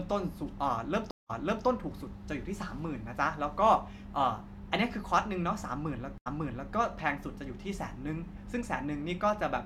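At 1.11 s the speech stops for 185 ms. This is a stream reconnect. The connection dropped, and the player reconnected and started a new decoder mid-stream. The speech resumes about 0.36 s earlier, repeating a short stretch, because the server resent a burst. The first frame fades in softly. At 6.18 s it happens again, with an 80 ms gap. This time the speech resumes about 0.47 s earlier.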